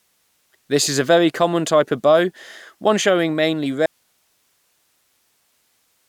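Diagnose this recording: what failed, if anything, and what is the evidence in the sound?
At 3.86 s, right after "bow one showing mainly", the speech cuts off abruptly and never returns; the rest of the clip holds only a steady hiss sitting very roughly 45 dB below the speech level. This is an audio dropout to a faint residue: the signal feed was lost while the path beyond the break stayed live, so the hiss of the open chain carries on. The likely stage is the analogue wiring, such as a connector or cable losing contact.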